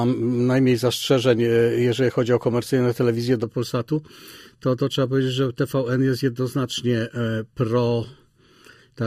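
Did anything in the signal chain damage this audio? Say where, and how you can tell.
Yes. From 3.44 s to the end, the sound turns hollow and phasey. That is channel delay (comb filtering): one channel runs late by roughly 0.7 ms, likely a buffer or driver stage misaligning the pair before a mono sum. Shared content cancels near 700 Hz and again at regular intervals above it. On a spectrogram, evenly spaced dark horizontal stripes appear at 3.44 s and hold steady to the end.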